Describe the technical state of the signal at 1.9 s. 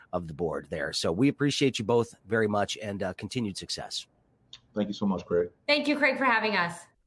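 At 1.9 s the speech signal is intact, with no audible dropout, distortion, glitch or other fault at that point.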